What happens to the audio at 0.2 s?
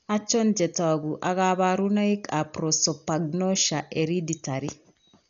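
At 0.2 s the speech is dull and muffled, with nothing above 7 kHz and a rough, fluttering grain around the voiced sounds. This runs through the whole clip. The likely cause is heavy Dolby Digital compression at a very low bitrate, around 48 kbps. The encoder narrows the band and leaves many frequency lines without mantissa bits, so the decoder fills them with dither noise. That noise-filled flutter distinguishes it from a plain low-pass filter, which would sound dull but clean.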